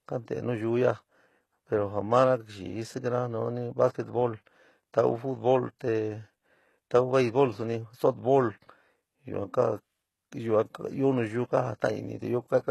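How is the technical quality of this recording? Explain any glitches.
The recording has one fault, present throughout the speech: HE-AAC compression damage that is plainly audible. The top end stops at about 12.3 kHz, and the treble above the crossover sounds rebuilt rather than captured. This fits a very low bitrate around 16 kbps. The codec likely coded only the lower band and synthesised the highs by copying them upward. This leaves s sounds gritty and metallic, not simply dull as a plain low-pass would.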